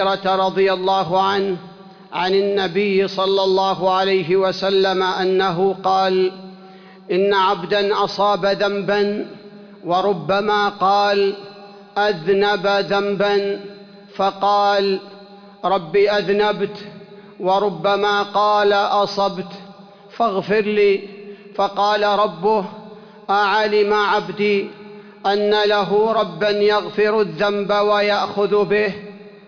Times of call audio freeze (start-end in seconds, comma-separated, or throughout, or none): none